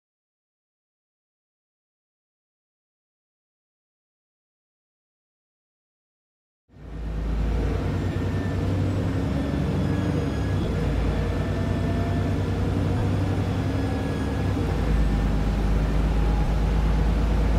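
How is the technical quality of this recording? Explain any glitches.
The recording has four short glitches caused by lost LE Audio frames, at 8.12, 10.61, 12.98 and 16.44 s. The LC3 decoder filled each gap by reusing the last spectrum with random signs, so tones smear into a brief noisy blur rather than dropping to silence. That blur is what distinguishes concealment from a plain dropout or click. Each gap loses about 30 to 40 ms of audio, consistent with five 7.5 ms frames, four at 16.44 s. At 10.61 s the losses are scattered across 60 ms, with the longest run roughly 15 ms.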